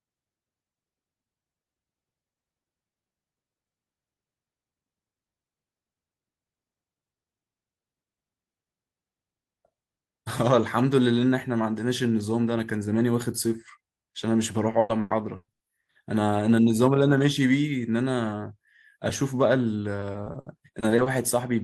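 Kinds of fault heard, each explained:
Repeated packet loss (robotic sound): lost stretches are patched by repeating preceding audio, so speech turns choppy with pieces missing near 14.7–15.6 s and 20.0–21.1 s, with copied, smeared spectrogram frames.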